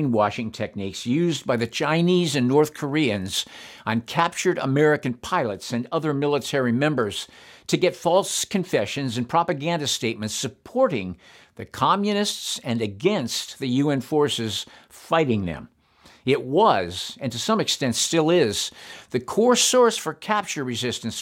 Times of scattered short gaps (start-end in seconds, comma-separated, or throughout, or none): none